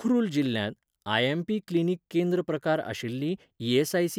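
No technical faults occur at any point in the recording, so there is nothing to describe in time order.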